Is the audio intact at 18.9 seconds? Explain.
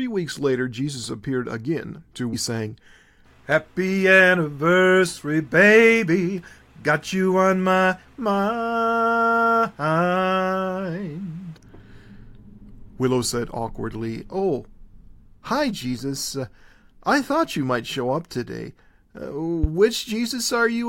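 Yes, at 18.9 seconds the audio is intact, with no dropout, click, distortion or other fault at that moment.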